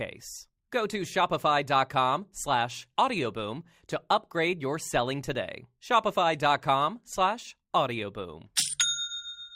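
Nothing stood out as a technical problem on listening.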